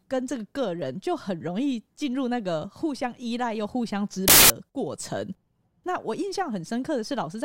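From 4.28 to 4.50 s the speech collapses into loud, harsh noise. This is a wrong sample width fault: 16-bit samples are read as packed 24-bit ones, so each value mixes bytes from neighbouring samples. Unlike byte-order noise, which keeps the timing, the buried speech runs 1.5 times too fast and high.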